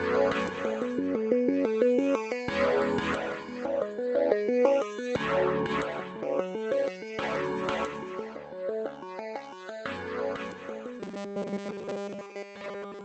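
From 11.00 s to the end, the sound turns into robotic sound from repeated short buffers: a rigid metallic buzz at 200 Hz. The likely cause is audio arriving too seldom, so a 5 ms chunk is looped over most of the sound while real audio is skipped. On a spectrogram this shows as evenly spaced horizontal harmonics at multiples of 200 Hz, sitting under the call path's 8 kHz ceiling. The waveform shows short, near-identical cycles repeating.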